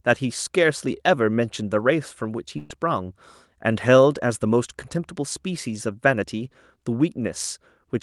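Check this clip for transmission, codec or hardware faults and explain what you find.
One transmission fault stands out, a burst of packet loss in this speech clip. From 2.57 to 2.72 s, the last sound is suddenly held and fades out over about 120 ms, then snaps back in further along, with a short stretch of speech gone. Several packets in a row never arrived in time, so the receiver stretched and faded the last sound to cover the hole instead of playing what was lost. The call codec's top end stops around 12 kHz.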